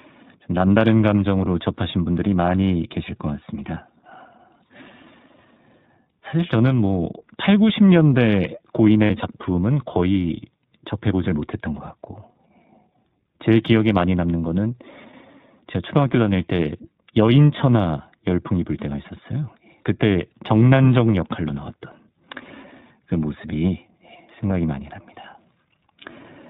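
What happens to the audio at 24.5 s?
At 24.49 to 24.52 s there is a lost iLBC frame: a brief gap of about 20 ms, which fits a single dropped 20 ms frame. The decoder fills it by repeating the last pitch cycle blended with noise, so instead of a click or a moment of silence you hear a very short held, slightly buzzy vowel-like sound. What sets it apart from concealment in codecs that chain frames together is that the speech snaps back to normal right after, with no smeared or warbly recovery.

Underneath, the whole passage carries the iLBC codec at 15.2 kbps in 20 ms frames. The damage is plainly audible. Everything above 4 kHz is gone, which makes the sound narrowband and muffled, and the independently coded excitation gives the voice a rough, synthetic edge. That constant band-limited roughness is distinct from the momentary held tone of the lost frame.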